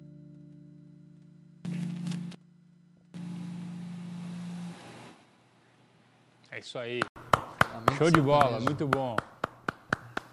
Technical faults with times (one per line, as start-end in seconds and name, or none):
0.00-7.16 input switched to a poorer device